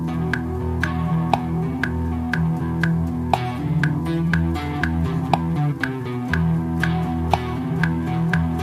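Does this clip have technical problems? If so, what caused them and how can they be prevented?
No, there's nothing going wrong here technically, so there's no cause to track down and nothing you need to do differently to prevent it.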